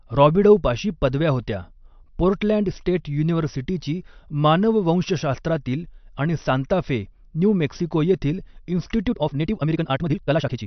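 From the start, the speech carries plainly audible MP3 compression damage. Weak detail swirls in and out from frame to frame, giving a watery sound. The likely cause is an encoder starved of bits, which fits a bitrate around 48 kbps.

At 9.07 s a time-stretched section begins and runs to the end. The pace jumps abruptly to 1.86 times normal, yet the pitch stays the same. It sounds rushed, likely because software dropped short slices to squeeze the audio.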